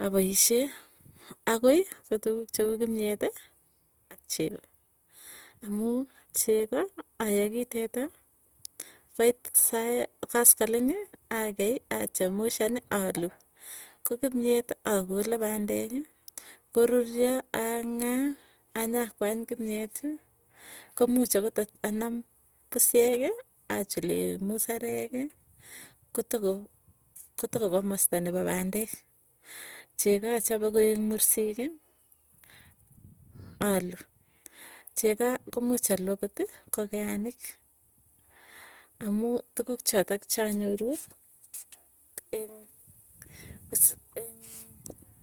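Throughout the speech, low-bitrate codec artefacts persist, with nothing above 20.2 kHz. This is likely low-bitrate audio saved at a high bitrate, so nothing was restored.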